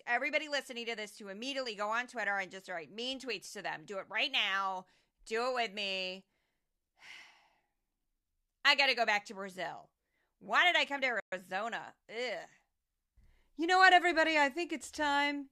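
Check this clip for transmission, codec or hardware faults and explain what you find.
One fault stands out in this speech clip: a playback stall. From 11.20 to 11.32 s the audio stops mid-flow for about 120 ms, then continues. The player was likely starved of data or had its thread blocked. A gap this long sets it apart from a brief dropout of a few milliseconds.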